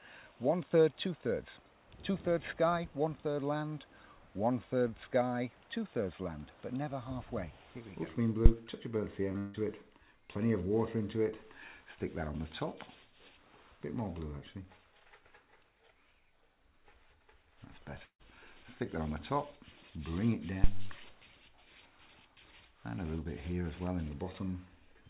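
A phantom power thump hits at 8.46 to 8.52 s: a supply switched on a live input sends a voltage step through the coupling capacitors, giving a short, deep thud that dies away in about 14 ms.

Short concealed packet loss follows at 9.32 to 9.36 s. Roughly 20 ms of audio failed to reach the decoder in time, so the receiver extended the preceding sound for 22 ms and blended back in, leaving a brief smear.

Almost immediately, at 9.38 to 9.56 s, comes what is likely a long network dropout. About 160 ms went missing, and the receiver stretched the last sound into a fading continuation for the full gap, with no silence, before the audio resumed past the lost part. A second likely long network dropout at 18.04 to 18.21 s again loses about 160 ms. Here the continued sound fades out and about 80 ms of silence is heard before the audio returns.

A second phantom power thump runs from 20.64 to 21.02 s. 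This time it is a low thump whose tail decays over about 86 ms. Through all of this the G.711 mu-law call path leaves nothing above 4 kHz.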